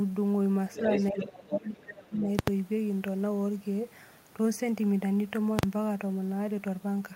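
Speech recording with three kinds of fault. From 0.74 to 1.6 s the other side's voice is leaking through, only a few dB below the talker, most likely because the echo canceller failed to fully remove the far end picked up from the loudspeaker. The speech is also suppressed in double talk: a shallow dip of a few dB at 0.8 to 0.88 s, then from 1.11 to 2.28 s the talker is pushed down by around 20 dB for about a second in total, likely the canceller attenuating everything when it could not separate near-end speech from echo. Invalid numbers at full scale appear at 2.39 to 2.48 s (85 ms) and 5.59 to 5.63 s (43 ms): the output jumps to a flat extreme value far beyond the speech peaks for each block, giving a very loud pop. The lengths fit 4096- and 2048-sample processing blocks.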